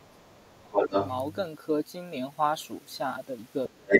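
Right from the start, 0.0 to 0.95 s, the talker's speech gets pushed down hard, dipping by roughly 30 dB at its worst. That's speech suppressed in double talk: with both ends talking at once, the echo canceller likely couldn't tell the local voice from loudspeaker echo and ducked everything. Overlapping the tail of that, 0.77 to 1.08 s, the other side's voice is leaking through, coming in about as loud as the talker, likely residual echo the canceller didn't strip from the mic. Near the end it happens again. From 3.68 to 3.91 s the talker is squashed by about 30 dB once more, likely the same double-talk suppression. Then from 3.88 s to the end of the clip the other side's voice leaks through again, this time noticeably louder than the talker, by around 10 dB, likely because echo cancellation fell short.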